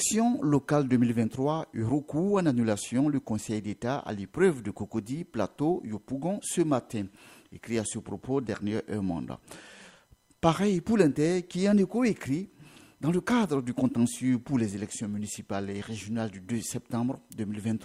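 Nothing in the audio stands out as a technical problem, so there's no fault to point to anywhere along the way.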